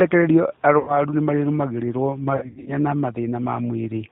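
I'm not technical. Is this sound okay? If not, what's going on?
No. The whole clip has passed through the G.729 codec, a low-rate phone-call compressor that rebuilds speech from a simplified model. Everything above about 4 kHz is gone, so the speech sounds muffled, a little rough and synthetic, and the damage is plainly audible.

There is also VoIP packet loss concealed by the speech codec, twice. From 0.79 to 1.01 s, just before "ni marĩrumagererwo", about 90 ms of audio went missing. The decoder filled the gap by stretching the last sound into a fading buzz or noise, and the speech stays weak briefly afterward. From 2.36 to 2.72 s, just after "ni marĩrumagererwo", a larger loss of about 210 ms, scattered across 300 ms, causes the same kind of smeared dropouts.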